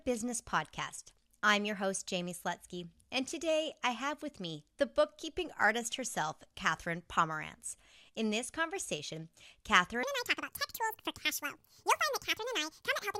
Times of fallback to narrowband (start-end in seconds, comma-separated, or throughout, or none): none